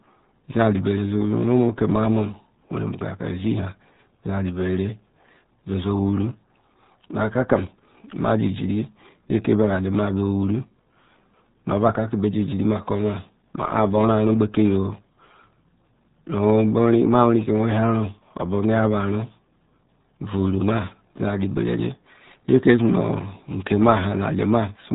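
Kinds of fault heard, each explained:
RealAudio 14.4 codec: The whole speech clip passes through a very low-rate dial-up speech coder. Nothing gets through above 3.8 kHz, so the speech sounds muffled and dull. Heavy coding damage adds a gargly, watery texture, which fits an 8 kbit/s RealAudio 1 stream.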